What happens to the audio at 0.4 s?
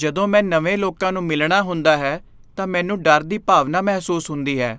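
Nothing goes wrong at 0.4 s; the speech carries on intact there, with no dropout, click, distortion or other technical fault.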